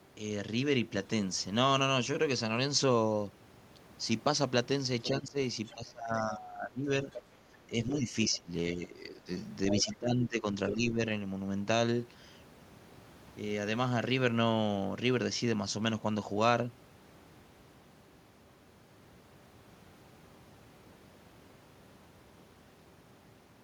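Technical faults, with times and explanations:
5.21–5.37 s, 5.74–7.07 s, 7.67–9.28 s and 9.84–11.0 s, speech suppressed in double talk: the echo canceller likely could not separate the near talker from the loudspeaker echo while both sides spoke at once, so it turned the whole microphone signal down. The talker's speech dips by roughly 15 to 20 dB, briefly in the first span and for around a second in the longer ones, sounding pumped and partly cut away.
5.65–5.74 s, 7.11–7.23 s, 9.69–9.93 s and 10.70–10.74 s, other side's voice leaking through: residual loudspeaker echo likely slipped past the canceller into the microphone path. Short scraps of a second voice appear, faint at first at roughly 25 dB below the talker, then about 15 dB down, and by 9.69 s and 10.70 s only around 5 dB below, nearly as loud as the talker, the last two overlapping the final suppressed stretch.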